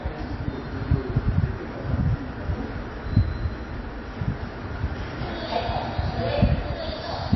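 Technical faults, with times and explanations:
Throughout, MP3 compression: the sound is plainly damaged, with a watery, swirling quality, smeared attacks and metallic chirping on bright, noisy parts, and nothing at all above 5.8 kHz. This is likely a low-bitrate MP3 encode, and the heaviness points to something around 23 kbps. Starved of bits, the encoder discarded the treble above a fixed cut-off and zeroed weaker frequency lines that flicker on and off between frames, producing the swirl and chirps.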